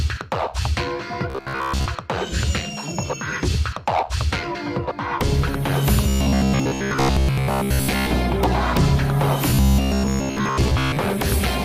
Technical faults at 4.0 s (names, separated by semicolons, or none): none